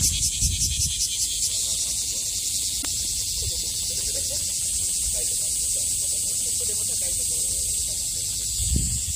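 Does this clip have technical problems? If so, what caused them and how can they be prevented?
Yes: a short glitch cuts through the sound from 2.78 to 2.85 s. This is damaged data in a compressed stream: corrupted bytes made the decoder misread frames, lose sync and hunt for the next valid frame header. Checksummed transfer and intact, verified files prevent it.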